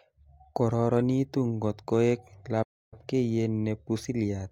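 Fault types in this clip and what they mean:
Playback stall: the speech drops to silence at 2.62 s and picks back up at 2.94 s, a gap of 0.29 s. Likely the player ran short of data or its thread got blocked, so output went quiet until it recovered.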